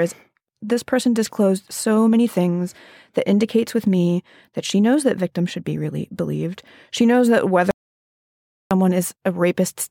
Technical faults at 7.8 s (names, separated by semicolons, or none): audio dropout to silence